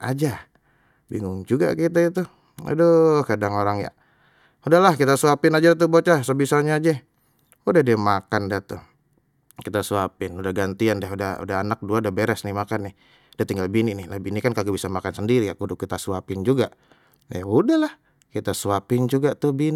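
No technical faults are audible.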